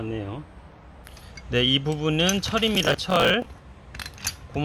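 From 2.75 to 3.46 s, processor overload crackle tears through the sound. The processor kept missing its deadlines for short buffers, around 10 ms each. Each miss replayed a scrap of old audio with hard edges. About twenty such misses give a gritty burst that stops when the load passes.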